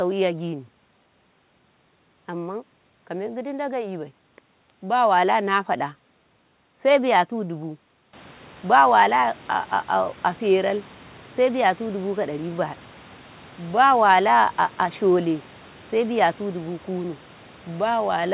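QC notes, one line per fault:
No faults found.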